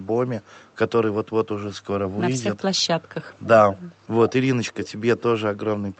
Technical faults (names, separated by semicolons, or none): echo leak